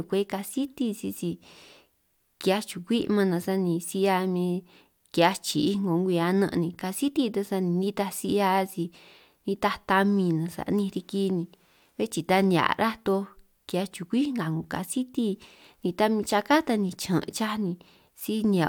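Nothing technical stands out in this speech recording; there's no fault here to point at or explain.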